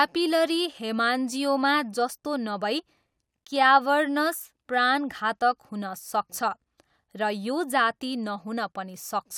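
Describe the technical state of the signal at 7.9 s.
At 7.9 s the speech signal is intact, with no dropout, clipping, glitch or other audible fault.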